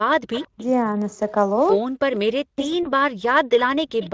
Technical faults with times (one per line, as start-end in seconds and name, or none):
0.33-0.65 echo leak
0.51-0.59 speech suppressed in double talk
1.80-3.56 speech suppressed in double talk
2.83-2.92 VoIP packet loss concealed by the speech codec
4.00-4.10 echo leak